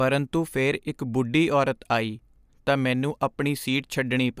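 No technical faults can be heard anywhere in this speech.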